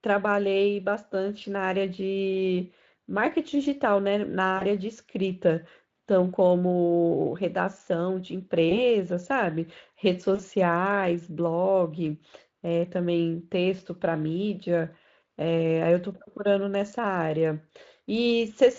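Speech clip, carried over a lightly coded Speex path. VoIP packet loss concealed by the speech codec occurs at 4.57 to 4.64 s, 8.69 to 8.82 s and 10.35 to 10.42 s. Gaps of about 40, 20 and 40 ms fit lost 20 ms frames. The decoder smears them into a brief buzzy tone or coloured noise that fades.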